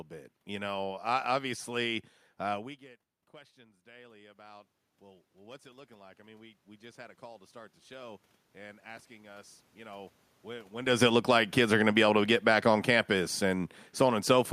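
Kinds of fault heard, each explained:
Automatic gain rising: After "uh we get" the input drops about 24 dB. The gain control slowly lifts voice and room noise together, by about 12 dB.
Automatic gain falling: From 10.88 s the input is too loud for the raised gain. Voice and background then sink together as the gain drops.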